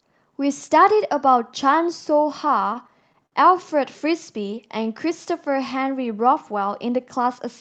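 From 2.35 to 3.35 s the speech hits repeated stalls, a stutter. The packets showed up late or slower than playback, so the jitter buffer kept running dry, eight times in that second. Each time the receiver stretched the last bit of sound to cover the wait, fading it on the longer ones, with the longest about 58 ms. That adds up to 126 ms of filler, about 13% of the span. Nothing actually drops out, but the speech catches and drags in little hiccups.

Then from 4.41 to 5.06 s there's a jitter buffer slow-down. The buffer was low, or had just raised its target delay, so to rebuild its reserve the receiver repeated single pitch periods and slivers of pause over and over. That stretches the stretch by 48 ms and plays it at 94% speed. The pitch stays put, but sounds come out drawn-out. All of it sits on a WebRTC call path whose Opus coding tops out around 8 kHz.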